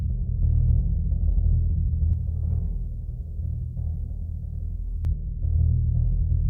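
Pre-emphasis left on, from 2.13 s to 5.05 s in this music clip. In that stretch the treble rises to about 11 dB above the 1 kHz level by 10 kHz, so the music turns thin, glassy and hissy, with sharp sibilant edges. A treble lift was applied for recording or transmission, and the matching de-emphasis cut that should restore the balance on playback was never applied. The shape of the lift fits the J.17 curve.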